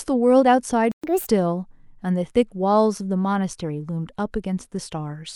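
At 0.92 s the speech cuts out and the output stays silent until 1.04 s, a gap of 120 ms. This is a playback stall. The break lands mid-flow, not at a natural pause. The player likely ran out of buffered data or had its thread blocked, so nothing reached the output. When sound returns, it picks up where it stopped.

From 1.04 s to 1.28 s comes a catch-up at higher speed. The player works through its backlog at 1.5 times normal speed. It does this by resampling, so pitch rises along with tempo, by roughly seven semitones. The speech sounds hurried and noticeably chipmunk-like for about a quarter of a second. Then speed and pitch drop back to normal.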